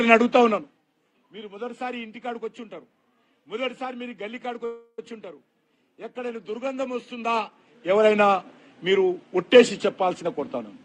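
At 4.65 s the audio stalls for about a third of a second, until 4.99 s. What fills the gap is a fading continuation of the preceding sound, a buzzy or hissy smear that dies into roughly 60 ms of silence before the signal resumes exactly where it left off. This is a call audio freeze, likely caused by delayed packets draining the jitter buffer. Nothing is lost, but playback now runs 327 ms later than before.

From 10.10 s to 10.75 s the jitter buffer speed-up trims an accumulated backlog. The receiver cuts many short pitch-period slices in succession, removing about a tenth of a second in total. Playback therefore runs at 115% speed for this stretch. Pitch is unchanged, so the effect is a hurried delivery rather than a raised tone.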